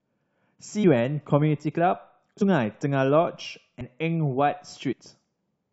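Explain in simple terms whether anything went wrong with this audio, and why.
The speech jumps forward four times, at 0.83 s, 2.40 s, 3.80 s and 4.91–4.93 s. This is compressed frames skipped. The file stores audio in blocks of about 23.2 ms, and here several blocks in a row never get played, either missing or rejected as damaged. The first two jumps lose about seven blocks, roughly 150 ms each. The last two lose about four, roughly 100 ms.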